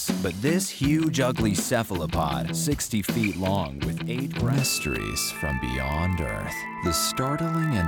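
Throughout, a block size mismatch (padded) zero-fills each 1024-sample read, inserting tiny gaps heard as a 43.1 Hz buzz, seen as evenly spaced vertical notches in the waveform and spectrogram.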